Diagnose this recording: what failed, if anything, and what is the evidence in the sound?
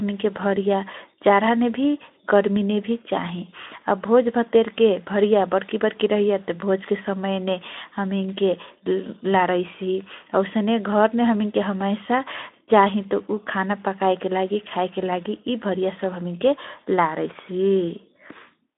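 Nothing has failed here: the speech arrives over a narrow, phone-style Speex link with nothing above 3.8 kHz, and that's just how the line is set up, not a sign of anything going wrong.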